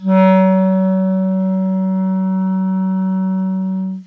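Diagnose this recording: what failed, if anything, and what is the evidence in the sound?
Nothing failed; no faults heard.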